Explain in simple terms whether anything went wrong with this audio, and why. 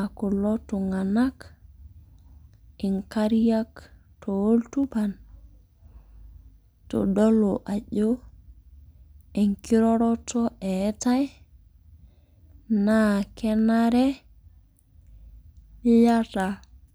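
Three sharp clicks cut into the speech at 2.99, 4.84 and 7.19 seconds. They are likely dropped samples, where a tiny sliver of the recording went missing and the sound jumps abruptly.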